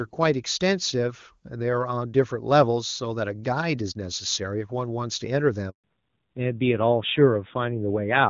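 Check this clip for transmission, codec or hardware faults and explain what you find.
Two faults sit at the end of this speech clip: a handover gap followed by a fall back to narrowband, heard against wideband HD Voice whose codec damage is faint before 5.70 s.

From 5.70 to 5.84 s there is a handover gap of 140 ms. The call is being passed from one network to another, and no speech frames arrive while the switch completes, so the sound fades out within a few tens of milliseconds and then goes silent until the new link carries audio. Whatever was said in that window is simply gone. A waveform shows a short taper into a flat line, and a spectrogram shows a clean vertical blank band across all frequencies.

From 5.84 s to the end, the call falls back to narrowband. The new link is running an older narrowband codec in place of AMR-WB, and the rougher texture fits a low AMR-NB rate around 7.4 kbit/s. 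Nothing above 4 kHz survives, so sibilants lose their edge and the sound turns duller and rougher. On a spectrogram the energy between 4 and 7 kHz stops abruptly at the gap and stays empty, leaving a hard ceiling at 4 kHz.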